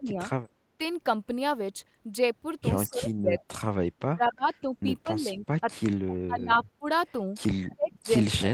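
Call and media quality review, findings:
Speech suppressed in double talk: speech level drops at 0.0–0.19 s (about 15 dB), 2.87–3.63 s and 3.96–5.94 s (about 30 dB each), 6.26–6.9 s (about 20 dB), and 7.75 s to end (about 35 dB). Likely echo canceller attenuating near-end speech during overlap. Waveform envelope caves in.

Background gated by the echo canceller: room noise floor dips about 6 dB, 0.47–0.59 s, then recovers. Suppressor clamping the mic while far-end plays. Waveform shows a brief notch in the noise floor; spectrogram shows a short vertical gap across the background band.

Echo leak: faint delayed copy of speech at 6.09–6.14 s (about 20 dB below speech) and 7.69–7.75 s (about 30 dB below), 228 ms behind the source. Likely residual loudspeaker echo passing the canceller. Spectrogram shows a weak repeat of the speech pattern, 228 ms later.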